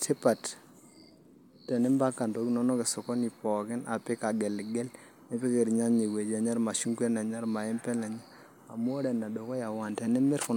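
No technical faults are audible.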